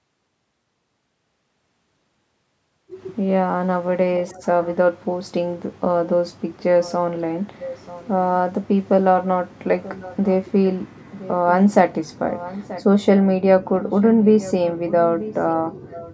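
Echo leak appears at 4.26, 6.58, 7.58, 9.25, 11.11, 12.33, 13.83 and 15.9 s. A faint copy of the speech returns 933 ms late. It sits roughly 15 to 25 dB below the speech. The likely cause is an echo canceller letting loudspeaker pickup through.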